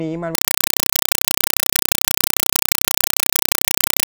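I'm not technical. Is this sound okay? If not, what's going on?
No. From 0.35 s to the end, the speech is replaced by loud, chattering static: a compressed stream played as audio. Undecoded Dolby Digital data is being played as sound, giving short noise bursts about 31 times a second. That steady rhythm is what sets it apart from ordinary hiss or random crackle.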